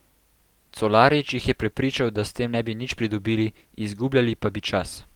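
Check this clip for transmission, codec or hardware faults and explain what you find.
Nothing in this speech clip points to a transmission, codec or hardware problem.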